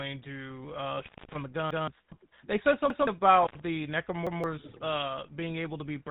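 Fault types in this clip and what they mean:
GSM full-rate codec: A vocal-tract model driven by sparse pulses gives the speech a plainly audible buzzy, gravelly roughness, with nothing above 3.8 kHz, consistent with 13 kbps GSM.
Repeated buffer: When new audio arrived late, the last 0.17 s block played once more with a hard join at 1.71, 2.90 and 4.27 s, fitting an 8192-sample buffer.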